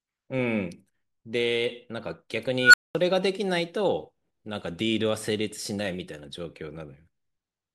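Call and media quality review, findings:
Unstable filter, 2.61–2.95 s. Tone around 1.5 kHz swells over about 123 ms, hits clipping, then drops to silence for about 213 ms. Probable component: recursive filter stage given bad coefficients. Output grows without bound until overflow, then sound cuts until the filter state resets.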